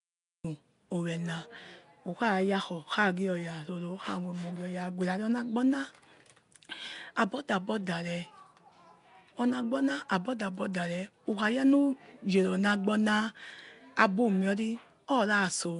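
For the first 0.45 s there is only digital silence, then speech bursts in abruptly at 0.45 s with no attack, a cut-off start where recording began mid-sound. Throughout, the speech carries a rough, hissy halo and a smeared, underwater quality, with nothing above 10.6 kHz, likely from Nellymoser compression at a rate that fits about 44 kbps.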